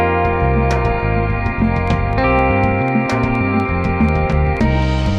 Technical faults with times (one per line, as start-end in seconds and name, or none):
1.88-5.07 train of clicks